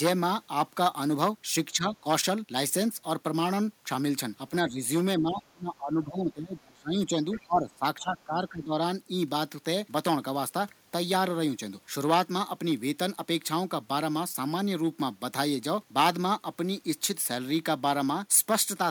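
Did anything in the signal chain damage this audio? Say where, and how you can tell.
Yes. Speech suppressed in double talk at 1.72–2.05, 4.63–4.8, 5.17–7.21 and 7.45–8.79 s: the waveform dips up to about 25 dB and the spectrogram thins. This is likely the call processing's echo canceller ducking both talkers.

The other side's voice leaking through at 5.38–5.42, 7.33–7.46 and 7.72–7.78 s shows as faint spectrogram traces about 20 to 40 dB down. This is likely residual loudspeaker echo the canceller missed.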